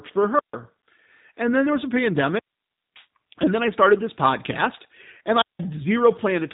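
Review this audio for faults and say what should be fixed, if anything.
The whole clip carries the sound of the G.729 codec, most likely the G.729A variant at 8 kbit/s. Nothing reaches above 3.8 kHz, so the speech sounds narrow and boxed in. The damage is plainly audible. The codec rebuilds each short frame from a vocal tract model, a pitch predictor and a few pulses. That is why the speech has a rough, slightly synthetic edge. To prevent it, record locally or route the call through a wideband codec.

There are three wireless microphone squelch dropouts. The first runs from 0.35 to 0.55 s, with about 150 ms of muted output. The second runs from 2.26 to 3.07 s, after "then there was a" and before "and then I started", with about 570 ms muted. The third runs from 5.39 to 5.60 s, after "started this podcast and", with about 180 ms muted. Each time the radio signal fades, the receiver's squelch shuts the audio off, and the sound returns once the signal recovers. 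To prevent it, shorten the transmitter's range, keep a clear line of sight, and use diversity receivers.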